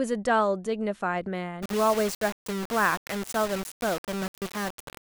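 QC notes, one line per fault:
1.62–5.10 s, low bit depth without dither: from 1.62 s to the end, the speech is most likely requantised to very few levels, consistent with about 4 bits, and rounded to the nearest step with no dither. The rounding error tracks the waveform instead of forming a steady hiss, so the speech carries a grainy, signal-dependent distortion sitting only around 10 dB below it. Quieter parts turn rough and sputter or vanish between steps.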